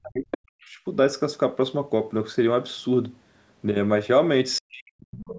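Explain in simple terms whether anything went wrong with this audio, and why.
Speech suppressed in double talk, from the start to 0.78 s and again from 4.6 to 5.25 s: the voice drops away almost to nothing, likely because both sides spoke at once and the echo canceller turned down this side's voice along with the echo.

The other side's voice leaking through, at 0.31 to 0.37 s, 0.61 to 0.65 s and from 5.26 s to the end: brief scraps of a second voice appear, likely loudspeaker sound the echo canceller missed.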